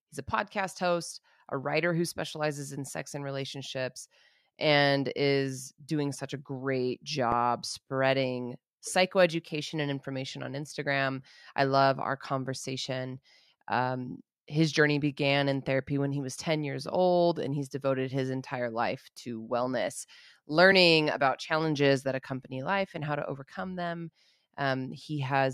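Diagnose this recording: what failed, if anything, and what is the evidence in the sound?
An underrun with held sample at 7.32 s, between "doing such a great" and "spreading psychoeducation and information", points to the driver or buffer stage. For 0.73 ms the output stalled and the converter held its last value. The waveform shows a short flat plateau. On a spectrogram there is at most a faint vertical tick. Playback resumed where it stopped, so the join is soft.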